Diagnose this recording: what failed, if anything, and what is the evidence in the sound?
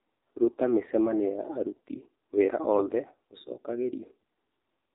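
The speech was encoded with the AMR narrowband mobile codec, at a low mode that fits about 7.4 kbps. Nothing above 4 kHz survives, and the vocal-tract model, fed only a few pulses per 5 ms subframe, leaves the voice plainly buzzy and synthetic throughout.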